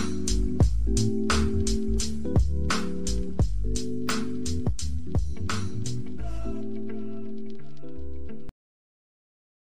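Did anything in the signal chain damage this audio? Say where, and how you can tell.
No, nothing along the chain audibly damaged this audio; the signal stays continuous and intact throughout, with no stage leaving a mark on it.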